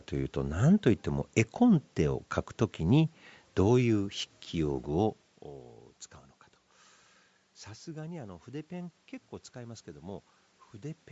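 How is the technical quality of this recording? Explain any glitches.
Plainly audible codec damage runs through the whole recording. Its character most likely comes from Bluetooth LC3 compression. Nothing reaches above 8 kHz, there is room noise, and the voice level shifts around 5 s as the talker moves.

Bluetooth LC3 compression: Throughout, the speech carries a grainy, breathy edge. The transform codec, at a rate that fits roughly 48 kbps in 7.5 ms frames, drops upper-spectrum detail and fills those bands with synthetic noise, so the fine texture sounds grainy and hissy.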